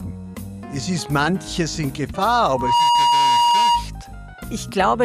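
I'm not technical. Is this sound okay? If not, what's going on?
No, there's a loudspeaker feedback squeal from about 2.48 to 3.88 seconds. A microphone is picking up the very speaker it's feeding, so the sound keeps looping round and getting louder at one pitch, around 948 Hz. You'll hear a steady whistle swell up over roughly a third of a second until it's a bit louder than the sound itself. It holds there until about 3.88 seconds, when it stops.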